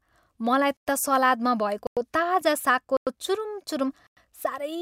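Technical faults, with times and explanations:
0.77–0.87, 1.87–1.97, 2.97–3.07 and 4.07–4.17 s: gap between chunks. The speech stops for 100 ms at each of these points. The gaps fall after every 1 s of audio, so each chunk plays in full with silence inserted at every join.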